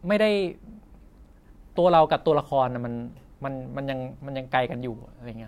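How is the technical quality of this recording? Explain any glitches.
The technical quality of this recording is sound, with no glitches to explain.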